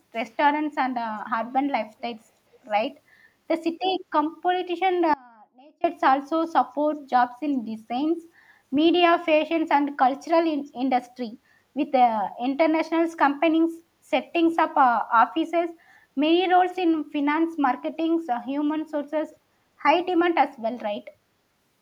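Echo leak at 2.53 to 2.58 s: a faint scrap of the speech returns 441 ms late, likely loudspeaker pickup that a far-end echo canceller failed to remove. Audio dropout to a faint residue from 5.14 to 5.84 s: the speech cuts off abruptly, leaving only a faint trace, likely because the signal was lost while the path stayed live. The echo leak recurs at 10.66 to 10.70 s, even quieter, again 441 ms behind.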